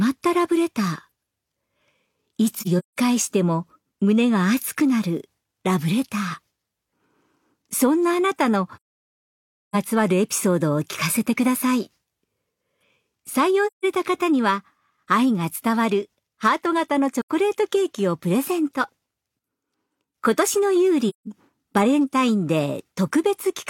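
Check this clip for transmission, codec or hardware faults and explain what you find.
There's one fault here, repeated five times: AAC frame loss with muting. The gaps fall at 2.59 to 2.96 s (about 213 ms lost, broken up, longest stretch around 150 ms), 8.76 to 9.76 s (nearly a full second), 13.66 to 13.85 s, 17.20 to 17.29 s, and 21.09 to 21.27 s. Each time the decoder zeroes the missing spectrum, and the overlapping windows fade the audio down and back up, so you hear soft-edged holes.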